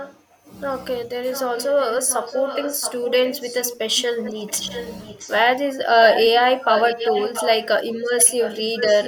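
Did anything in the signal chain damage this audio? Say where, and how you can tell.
Yes. An echo leak in call processing: a discrete copy of the speech trails 673 ms behind at 0–0.23, 1.31–3.78, 4.23–5.41, 6.07–6.28, 6.64–7.67 and 8.19–9.07 s, about 15 dB down, rising to about 5 dB down near 7 s. The likely cause is a loudspeaker echo canceller passing its pickup back. Room reverberation would decay smoothly, not repeat at one fixed lag.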